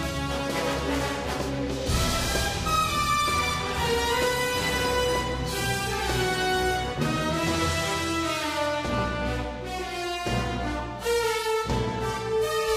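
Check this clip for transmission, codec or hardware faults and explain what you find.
Nothing to flag: no transmission, codec or hardware faults are audible anywhere in the clip.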